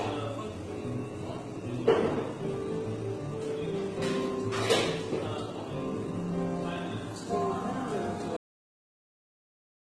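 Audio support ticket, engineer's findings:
Transcoding between lossy codecs, whole clip. Two layers of coding artefacts heard together. Nothing above 12 kHz. Likely HE-AAC at 16 kbit/s re-encoded to Opus at 16 kbit/s. Opus spends its bits on the earlier AAC damage and adds its own. The lower cut-off in the chain survives.

Cut-off end at 8.37 s. Sound stops mid-event, with no decay. Drops straight to digital silence for the last 1.4 s. Final buffers never written or played out. Writer or playback path shut down before flushing.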